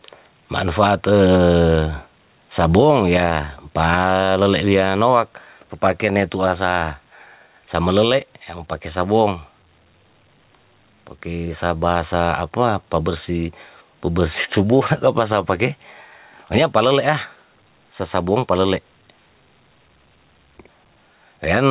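Gain pumping runs through the whole speech clip: the gain swings by around 10 dB, flattening the dynamics. The likely cause is input gain set far too high, with a fast limiter clamping each peak. Nothing is heard above 4 kHz, which fits a G.711 A-law call path at 64 kbps.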